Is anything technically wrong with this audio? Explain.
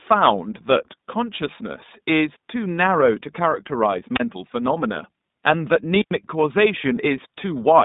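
Yes. Two faults are present: iLBC codec coloration throughout, and two wireless microphone squelch dropouts.

The iLBC codec is audible for the whole clip. The speech sits in a narrow telephone band of roughly 150 Hz to 3.7 kHz, with nothing above 3.8 kHz. The coding damage is plainly audible: a slightly rough, synthetic edge on the voice. It fits iLBC's 20 ms frame mode, which points to about 15.2 kbps. Each frame's excitation is coded on its own, without relying on the previous frame. That gives a grainy texture rather than the smeared, watery artefacts of a perceptual codec.

The wireless microphone squelch dropouts come at 4.15 to 4.20 s and at 5.98 to 6.12 s. In each one the radio signal fades, hiss briefly rises, and the receiver's squelch mutes the output. The first hole of near silence lasts about 32 ms and the second about 96 ms, after which the speech returns. The swell of static before each gap is what separates these from packet-loss gaps or concealment. 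Those cut in abruptly, or fill the gap with repeated codec frames, with no noise leading in.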